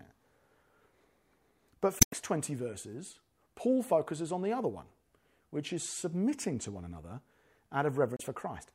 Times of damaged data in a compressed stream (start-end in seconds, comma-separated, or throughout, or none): 1.98-2.14, 8.17-8.21